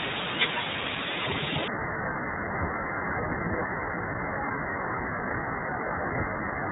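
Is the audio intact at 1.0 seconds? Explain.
No. iLBC codec damage runs through the whole clip, including 1.0 s. Each short frame, consistent with 20 ms blocks at about 15 kbps, is coded on its own, and nothing passes above 4 kHz, so the speech sounds muffled, slightly rough and synthetic.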